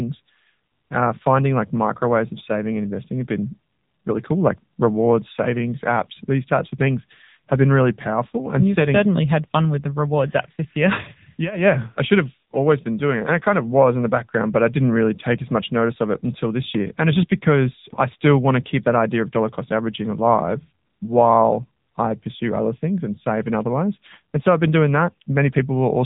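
AMR narrowband mobile codec throughout: nothing passes above 3.8 kHz, and the bit-starved vocal-tract model leaves speech plainly buzzy and synthetic, which fits roughly 8 kbps.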